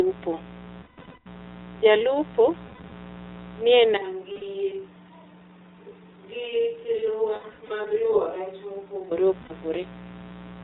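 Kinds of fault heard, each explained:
Mains buzz: A steady, raspy 60 Hz buzz with harmonics climbing into the kilohertz range, sitting roughly 20 dB under the speech the whole way through.
iLBC codec: Narrowband VoIP coding cuts everything above 4 kHz, so the speech sounds clear but rough and a bit synthetic throughout, with plainly audible damage.
Lost iLBC frames: The decoder fills missing packets with a buzzy, held vowel-like sound, around 0.82 to 1.28 s, 2.68 to 2.93 s, 4.32 s, 7.36 to 7.86 s and 9.42 s.
Switch to a distant microphone: From about 3.97 to 9.11 s the speech turns hollow and roomy, roughly 10 dB quieter with more room noise, likely because a farther microphone took over.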